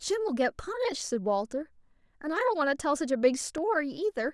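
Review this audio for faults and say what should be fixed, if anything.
A voltage spike, likely from a switch or static discharge, produced one loud pop at 3.58 to 3.60 s, roughly 5 dB above the speech. Secure cable connections and avoid switching or plugging equipment while recording.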